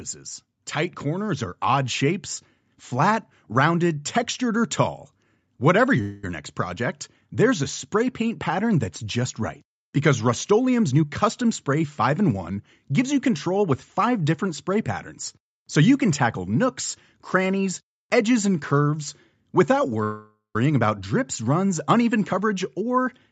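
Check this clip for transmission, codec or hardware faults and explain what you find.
Three kinds of fault turn up in this speech recording, spread across five events. The whole call is band-limited, with nothing above 8 kHz, which fits the Opus codec's coding bandwidth and the microphone chain.

Automatic gain rising, 0.18 to 3.29 s: the level swells steadily by about 6 dB over roughly three seconds, and the background rises with the voice. The automatic gain control judged the input too quiet and raised its gain gradually. Because it scales the whole signal, room noise climbs in step rather than the speech standing out alone.

Call audio freeze, 6.01 to 6.24 s and 20.03 to 20.56 s: the sound stalls into a fading buzzy continuation of the last instant, then resumes. The first stall lasts about 0.22 s and ends just before "next project there's". The second runs about half a second, ending in roughly 0.12 s of silence. 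Nothing is skipped afterwards. The likely cause is delayed packets draining the jitter buffer, so the receiver stretched the last sound until data arrived and then simply carried on.

Jitter buffer speed-up, 10.86 to 14.07 s and 22.33 to 23.07 s: speech runs hurried at unchanged pitch. The first stretch is about 7% fast and leads into "different spray patterns so". The second, right after "about drips runs uneven", is about 9% fast. The buffer held more audio than it aims for, so the receiver trimmed tiny pitch-period slices repeatedly. That removed roughly 0.2 s in the first stretch and roughly 0.07 s in the second.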